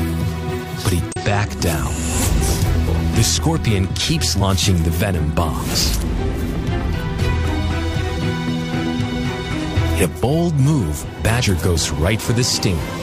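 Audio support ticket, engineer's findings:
Damaged data in a compressed stream. Short glitches at 1.12–1.17, 4.37–4.42, 8.13–8.18 and 11.38–11.44 s, each about 54 ms. Corrupt bytes in the encoded stream. Decoder misreads frames, loses sync, resyncs on the next header.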